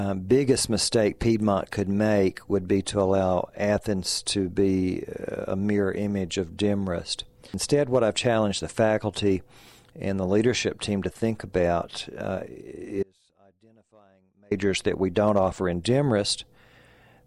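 At 13.03 s the sound cuts out abruptly for about 1.5 s, until 14.51 s. This is an audio dropout to a faint residue. Only a faint trace of the signal remains, far below normal level. The likely cause is a brief loss of the wanted signal while the path stayed live.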